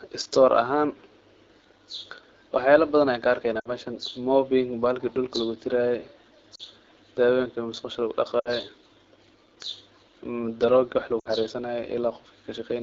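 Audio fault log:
throughout, AMR wideband (HD Voice) codec: the speech has been squeezed through AMR-WB at a low rate that fits 8.85 kbit/s, one of the two lowest modes. There are too few bits to model the excitation pulses and vocal tract shape finely, so the speech comes out rough and raspy throughout. The band above 6.4 kHz is filled with shaped noise rather than real detail, which gives the top end a hissy, synthetic edge.
3.59 to 3.69 s, 6.55 to 6.63 s, 8.39 to 8.50 s and 11.19 to 11.28 s, lost AMR speech frames: speech frames were corrupted over the radio link and discarded, two at 6.55 s and three at each of the others, consistent with about 40 ms and 60 ms of missing speech. The decoder repeats the last good pitch and vocal tract settings at falling gain, so each gap sounds like a short smeared, warbling stretch that quickly fades. Speech then resumes briefly weak or rough.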